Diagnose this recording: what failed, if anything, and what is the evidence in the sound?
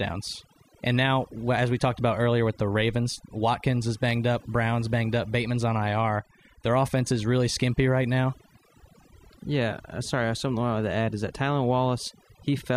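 The failure is overdone noise removal, at the call-processing stage, across the whole speech clip. The background drops and breaks up into twinkling specks. An over-aggressive suppressor is muting frequency bands near its noise estimate, taking quiet speech detail with them.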